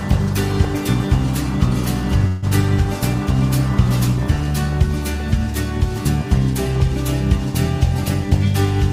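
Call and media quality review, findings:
Fading buzz continues the sound 2.27–2.45 s, then playback resumes intact. Call audio freeze: likely delayed packets emptied the jitter buffer, inserting about 150 ms.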